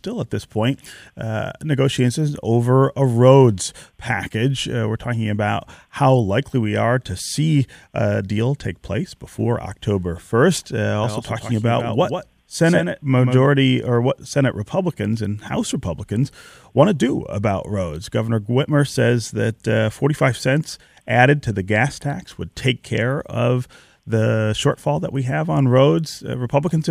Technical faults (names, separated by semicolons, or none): doubled audio track